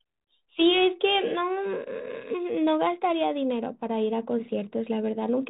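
Nothing here counts as a technical fault; the speech runs through G.726 ADPCM at 32 kbit/s, and that path is doing its job.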